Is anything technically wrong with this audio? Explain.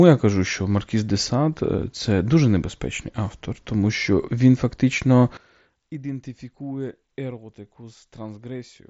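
Yes. One channel inverted is the likely cause of a collapse from 5.37 s, just after "він фактично", to the end at 8.90 s: with one side's polarity flipped, the shared content cancels in the mono sum, leaving only their mismatch, about 19 dB down, background included. The band limit near 7.7 kHz comes from the mSBC headset codec.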